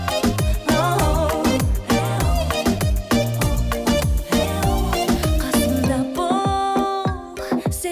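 No technical faults can be heard anywhere in the clip.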